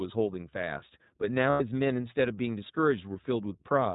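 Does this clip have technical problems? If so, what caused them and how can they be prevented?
Yes. The whole clip carries iLBC codec damage: nothing above 4 kHz survives, and the speech sounds plainly rough and synthetic, which fits iLBC's 15.2 kbps mode with 20 ms frames. Unlike a simple low-pass filter, it adds a coded graininess. Prevent it by negotiating a wideband codec.

From 1.50 to 1.62 s, lost iLBC frames leave about 100 ms concealed by a repeated pitch cycle mixed with noise, heard as a held, buzzy vowel. A plain dropout would be silent instead. The voice recovers at once. Prevent it with jitter buffering and better network quality.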